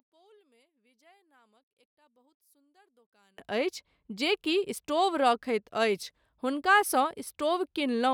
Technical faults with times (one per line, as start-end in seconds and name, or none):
0.00-3.38 one channel inverted